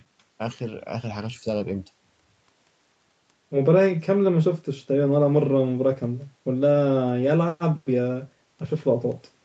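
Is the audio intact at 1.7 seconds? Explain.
Yes, at 1.7 seconds the speech is intact, with no fault at that moment.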